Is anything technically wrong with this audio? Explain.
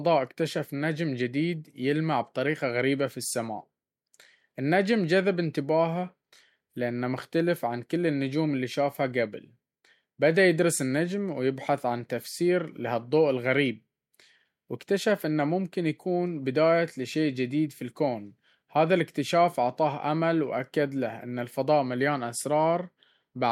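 No, nothing technically wrong turns up anywhere in this speech recording.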